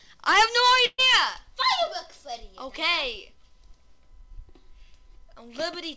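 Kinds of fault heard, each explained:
Burst of packet loss: Around 0.86 to 1.00 s, a run of about 120 ms of audio never arrived in time, and the receiver concealed the hole by extending the last received sound while fading it down. The result is a short held, smeared stretch of about 120 ms that ends in roughly 30 ms of near-silence before playback resumes with the missing portion skipped, all within a band that stops at 8 kHz.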